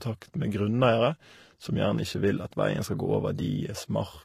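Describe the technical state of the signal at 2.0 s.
At 2.0 s, as throughout, the speech has likely gone through transcoding between lossy codecs: an earlier low-rate stage re-encoded as MP3. The second codec wastes bits on the first one's artefacts and adds its own, so both layers of artefacts sound together, with nothing above 14.9 kHz.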